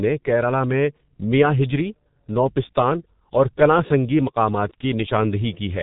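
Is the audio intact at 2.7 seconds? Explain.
No. At 2.7 s the speech sounds muffled and hoarse, with consonants smeared together and nothing heard above 3.8 kHz. This runs through the whole clip rather than being a moment's glitch, and it is the mark of the G.723.1 codec, damaging the audio heavily. The codec chops speech into 30 ms frames, refreshes its model of the voice only slowly, and squeezes everything into a very low bitrate, which fits about 6.3 kbit/s.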